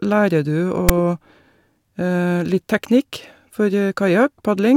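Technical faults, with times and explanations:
0.89 s, file tags played as audio: a brief, harsh rasp cuts into the speech with hard edges, lasting only about 9 ms, and it sits lopsided, pushed toward one side of the waveform. A block of text tag data has been read as if it were sample values. The character bytes become jagged, loud values clustered in a narrow range, which produces the grating buzz and its offset away from the centre line.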